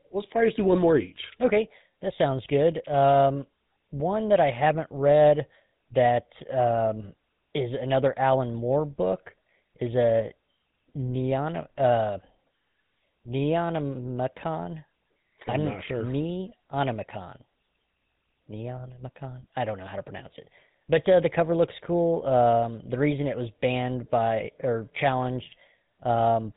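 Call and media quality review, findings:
GSM full-rate codec throughout: pulse-excited vocal-tract model, sparse excitation, consistent with 13 kbps. Speech buzzy and gravelly, nothing above 3.8 kHz, damage plainly audible.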